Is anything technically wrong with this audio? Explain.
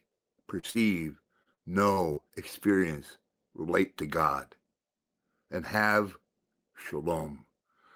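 Yes. Between 0.59 and 0.66 s, and again from 0.71 to 0.78 s, there is short concealed packet loss. About 40 ms of audio failed to arrive each time. The receiver extended the preceding sound and blended back, leaving a brief smear or wobble. Each is isolated, which separates it from the choppy run that follows.

From 1.43 to 2.25 s, repeated packet loss produces robotic sound. Holes of up to about 40 ms recur in close succession, and roughly a fifth of that stretch is patched by continuing earlier sound. The chained patches give a choppy, broken texture, unlike the single smears before it.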